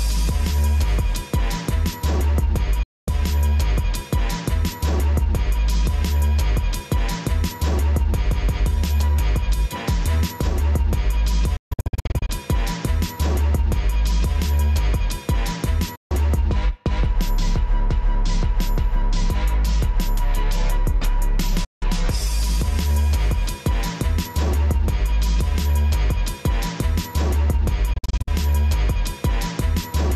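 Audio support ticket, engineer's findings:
Digital broadcast dropout, receiver muting on failed frames. Audio snaps to silence via an 8 ms fade at 2.83 to 3.08 s, 15.95 to 16.11 s and 21.64 to 21.83 s. Broken into several short holes at 11.56 to 12.30 s (longest gap 144 ms) and 27.93 to 28.28 s (longest 48 ms). Gap lengths step in 24 ms units, which fits 24 ms audio frames. Programme content during the gaps is lost.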